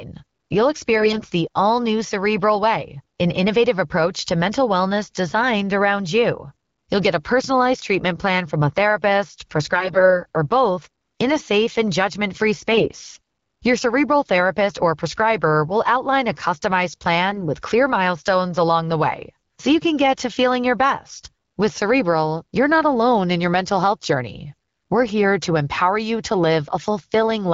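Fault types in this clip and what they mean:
AMR bit errors: Four brief bursts where the speech keeps its rough pitch and loudness but turns hoarse, scratchy and gargly, the longest after "safe and judgment free". Flipped low-priority bits in the AMR-WB frames misplace excitation pulses and skew fine pitch, gain and spectral values.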